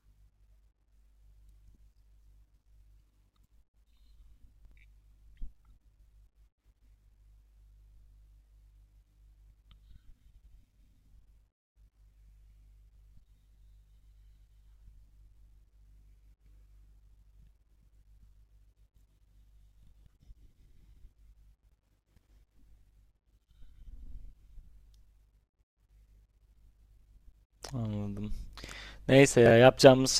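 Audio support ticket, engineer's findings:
Chunks out of order at 4.65–4.72 s, 12.95–12.99 s, 21.63–21.72 s and 29.46–29.50 s: brief jumbled speech. Buffer writer or playback queue placing a roughly 21 ms chunk a few slots late. No audio lost.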